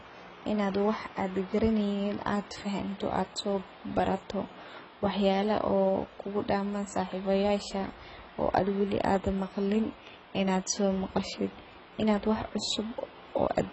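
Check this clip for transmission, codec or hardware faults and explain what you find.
One fault is present. Throughout the speech there is heavy AAC compression damage, likely from AAC-LC near 16 kbps. Nothing reaches above 8.1 kHz, and coarse quantisation leaves the sound dull, smeared and fizzy.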